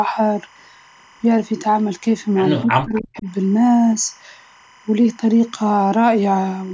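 Timecode bleed runs under the whole recording: a steady chirping warble, about 30 dB below the speech, flipping between roughly 1 kHz and 2 kHz. Linear timecode at 25 frames per second has leaked from an adjacent track or cable into the audio path.

From 2.64 s to 3.27 s the speech drops away in pieces, sinking by as much as about 40 dB across roughly half a second in total. The likely cause is speech suppressed in double talk: with both ends talking, the echo canceller attenuated the near talker along with the echo.

Inside that window, from 2.95 s to 3.21 s, a faint delayed copy of the speech surfaces about 263 ms behind the original and about 20 dB down. This is likely echo leak, where a loudspeaker-side echo canceller let residual pickup return down the line.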